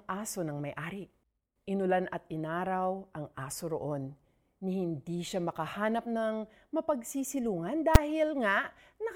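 At 7.95 s, after "siya makahanap ng mapagsisilungan", there is one sharp bang. Invalid numbers at full scale held the output at its limit for 5.8 ms.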